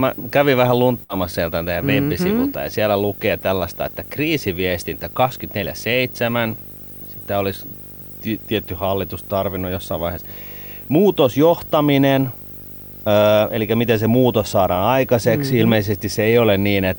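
Right from the start and running the whole way through, there's video or display buzz under the speech: a 50 Hz field-rate buzz with a layer of hash riding on top, plus a thin whine up at 15.6 kHz from the line rate. A screen or video cable has leaked into the audio path, and it's fairly prominent, roughly 15 dB below the speech, so you hear it through the pauses as well as under the talking.

At 1.03 s, just after "kävin vähän", there's a burst of packet loss lasting until about 1.12 s. A short run of audio never arrived in time, so the receiver papered over roughly 58 ms by stretching the last bit of sound it had and fading it down, which gives a brief smeared, held quality. Then it jumps ahead to "sieltä teidän", with about 60 ms of the actual speech simply gone.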